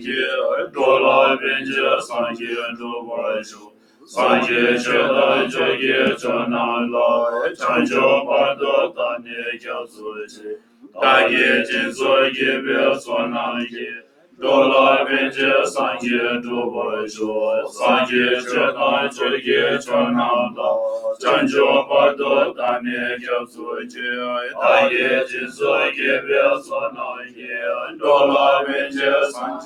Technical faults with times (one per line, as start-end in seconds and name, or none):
0.00-29.66 noise suppressor applied to music or sounds
0.00-0.79 sound cut by the noise suppressor
2.01-4.16 sound cut by the noise suppressor
8.88-10.98 sound cut by the noise suppressor
13.01-14.44 sound cut by the noise suppressor
17.13-17.81 sound cut by the noise suppressor
19.10-21.26 sound cut by the noise suppressor
22.51-24.01 sound cut by the noise suppressor
22.68 repeated buffer
25.27-29.66 sound cut by the noise suppressor